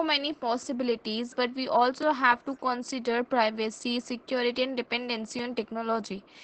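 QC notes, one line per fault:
Throughout: Opus voice compression. The speech sounds plainly hoarse, dulled and slightly robotic. The damage fits SILK's linear-prediction coding at a low bitrate of around 12 kbps, which leaves too few bits for the excitation and so smears its detail into a rough buzz.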